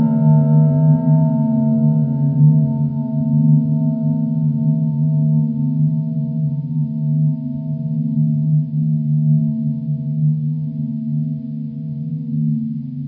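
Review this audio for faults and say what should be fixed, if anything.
Nothing needs fixing; no faults can be heard.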